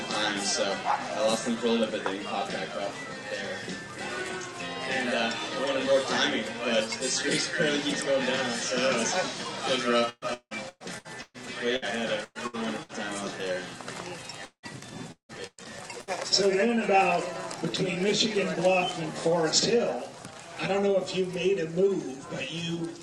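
From 10.09 to 11.37 s, repeated packet loss (robotic sound) leaves 600 ms missing, patched by extending earlier sound into choppy stretches that show as smeared, repeated spectrogram columns. A burst of packet loss follows at 11.76, 12.24, 12.47 and 12.83 s, each 60 to 120 ms, heard as a brief held buzz or fading hiss; the waveform shows a decaying envelope, with 30 ms of flat silence at 12.24 s. Repeated packet loss returns from 14.45 to 16.10 s, dropping 540 ms, with gaps up to 179 ms.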